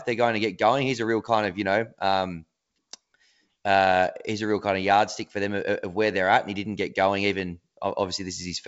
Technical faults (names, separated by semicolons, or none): none